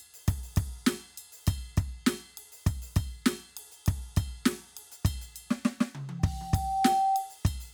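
Music, with a loudspeaker feedback squeal from 6.19 to 7.39 s: a microphone is picking up the speaker it drives, and at 773 Hz the loop gain passes unity, so that pitch feeds on itself. The tone swells over roughly the first three quarters of a second until it sits a few decibels above the music. On a spectrogram it is a bright horizontal line at 773 Hz that thickens as it grows, and on the waveform the envelope visibly balloons near the end.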